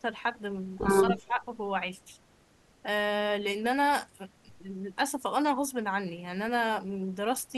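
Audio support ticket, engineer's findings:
Speech suppressed in double talk, 1.11–1.39 s: level dips around 10 dB, not a full dropout. Likely the echo canceller mistaking the near-end speech for echo while both sides talk, attenuating both.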